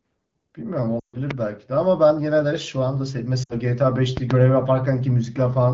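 It's a short speech recording with two bursts of lost AMR speech frames. At 0.99 s the sound drops to near silence within two frames during a gap of about 0.17 s, which fits roughly seven dropped 20 ms frames being concealed. The decoder keeps repeating the last good pitch and vocal tract settings while the gain falls. A shorter dip at 3.43 to 3.53 s points to about three frames. The wideband coding underneath sounds clean, consistent with 12.65 kbit/s HD Voice.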